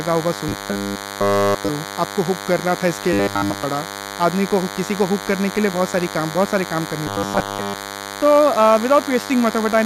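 A DECT cordless phone buzz runs through the whole clip. Radio bursts every 10 ms are rectified into a thin 100 Hz buzz with many harmonics, about 10 dB below the speech.

Robotic sound from repeated short buffers occurs at 0.49 to 1.70 s, 3.13 to 3.63 s and 7.07 to 7.74 s. Audio likely arrived too seldom, so 10 ms chunks were looped. The speech becomes a rigid, metallic 100 Hz buzz, completely so in the first two spans and mostly in the third.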